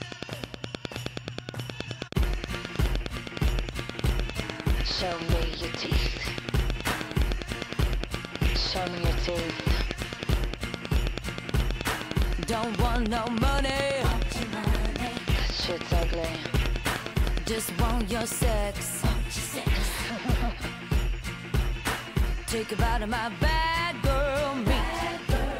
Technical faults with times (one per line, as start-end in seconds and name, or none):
0.02-18.44 train of clicks